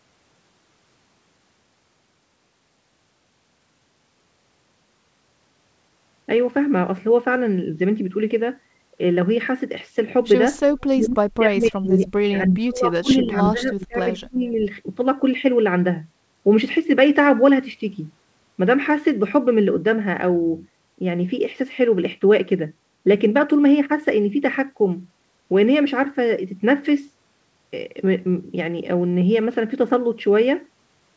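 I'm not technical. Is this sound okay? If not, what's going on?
No. Speech suppressed in double talk, from 10.92 to 14.55 s: for about three seconds the voice dips, at its worst to near silence, likely because both sides spoke at once and the call's echo canceller turned down this talker along with the echo it was fighting.

Echo leak, at 13.1 to 13.31 s and again at 14.45 to 14.52 s: a faint copy of the voice returns about 0.29 s late, the second even quieter, likely because a loudspeaker's sound reached a microphone and wasn't fully removed before being sent back.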